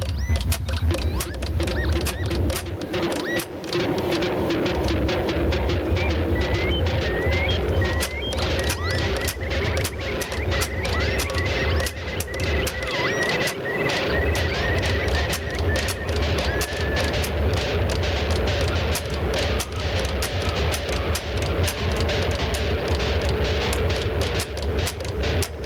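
Gain pumping runs through the whole recording, with the level swinging by around 10 dB. The likely cause is input gain set far too high for the microphone, so a fast limiter or compressor keeps clamping down on every peak and releasing in the pauses. Loud and quiet passages end up squeezed close together, leaving the audio flattened and breathing.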